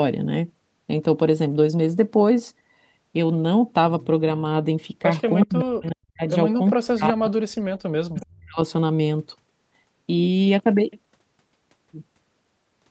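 From 5.41 to 5.65 s, an echo leak: the far end's echo canceller likely let part of its loudspeaker pickup through, so a faint copy of the speech returns 372 ms late, roughly 20 dB below the main level.

Overlapping it, from 5.45 to 6.24 s, speech is suppressed in double talk. With both sides active, the echo canceller likely could not tell the local talker from echo and ducked everything. The speech dips by as much as 40 dB for about 0.7 s.

The same double-talk suppression returns from 6.74 to 8.59 s, pulling the speech down for about 1.5 s in total, again with drops approaching 40 dB.

Within that stretch, from 8.17 to 8.26 s, a brief second echo leak slips back. It has the same 372 ms delay but is quieter, around 25 dB below the speech.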